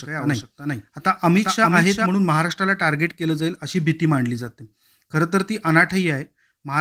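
A second, late copy of the signal, likely from the audio being captured twice through a slower path, is a doubled audio track from the start to 2.06 s. The speech is shadowed by a dry, full-band repeat roughly 400 ms behind and about 5 dB quieter, which cuts off abruptly.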